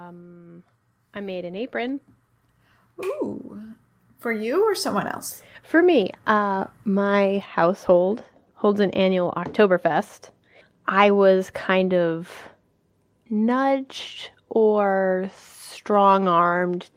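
Automatic gain rising from 0.35 to 8.69 s: the gain control judged the input too quiet and raised its level by about 14 dB, so speech and background swell together.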